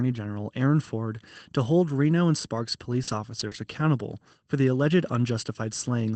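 At 3.03 s a 40 ms stretch of the Opus stream arrived too late for the decoder, and short concealed packet loss covered it. The receiver extended the preceding sound and then crossfaded back toward the real signal, leaving a brief smear through to about 3.10 s. Starting at 3.07 s, a lost packet rebuilt from error correction follows. The decoder played the low-bitrate backup carried in the next packet, so there is no gap, but those 40 ms sound grainier and noisier. The same backup recovery happens again at 3.39 s and at 3.51 s. In between, at 3.47 s, a second 40 ms concealment produces another short smear or wobble before the rough rebuilt frame. All of this sits on a 24 kbps call path whose audio stops at 8 kHz.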